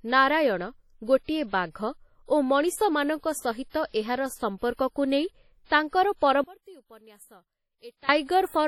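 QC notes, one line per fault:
Throughout: WMA compression, heavy ringing, washy hiss that swells and fades with the speech, nothing above 18.6 kHz; this fits a low WMA bitrate around 32 kbps.
3.70 to 3.74 s: pre-echo, a 47 ms hiss smearing ahead of an attack, unlike general codec wash because it precedes the onset rather than trailing it.
6.44 to 8.09 s: one channel inverted, likely, as the sound drops about 24 dB to a faint residue, like a dropout but not fully silent, with the background vanishing as well.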